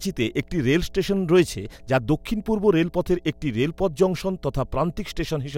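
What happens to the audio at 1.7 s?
At 1.7 s you're hearing mains hum, which runs through the whole speech clip rather than starting there. It's a steady 60 Hz drone, roughly 30 dB under the speech, from power-line leakage via a ground loop or a nearby transformer.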